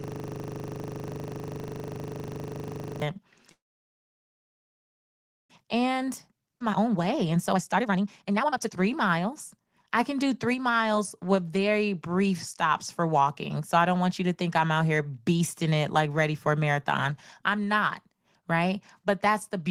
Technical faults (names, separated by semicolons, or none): system hang loop; call audio freeze; jitter buffer speed-up; skip ahead